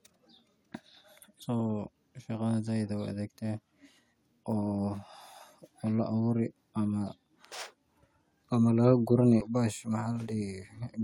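At 1.42, 3.97, 6.69 and 9.41 s, damaged data in the compressed stream desyncs the decoder, yielding a brief glitch each time.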